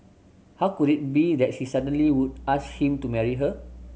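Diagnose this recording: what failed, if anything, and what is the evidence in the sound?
The analogue wiring failed, introducing mains hum from 1.79 s to the end of the speech. A steady low 60 Hz tone appears abruptly at that point and sits roughly 20 dB below the speech. A ground loop or nearby transformer is coupling the power line into the signal path. On a spectrogram this shows as a thin, unbroken horizontal line at 60 Hz starting at 1.79 s. In the waveform, the silences carry a regular low-frequency ripple.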